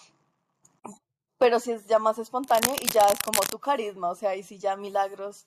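From 2.44 to 3.54 s, cable scratch noise sits over the speech as a dense, uneven scratching and rustling, roughly 5 dB below the signal. The likely cause is a worn cable or connector being moved, so its contact resistance fluctuates rapidly.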